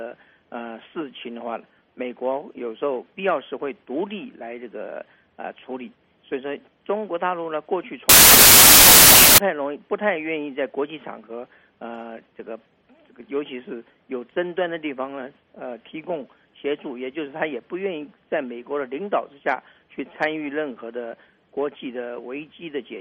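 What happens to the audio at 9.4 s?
At 9.4 s the sound is just coming out of a wrong sample width fault that runs from about 8.09 s to 9.38 s. Audio stored as packed 24-bit integers is read as 32-bit integers, so each read value straddles byte boundaries and most samples turn into near-random numbers. The result is loud, harsh noise with the real sound faintly buried inside, playing about 1.33 times too fast and correspondingly higher in pitch. On a waveform the span looks like a dense block of loud noise. On a spectrogram it shows as broadband noise filling every frequency, with faint upward-shifted traces of the original, stopping abruptly at 9.38 s.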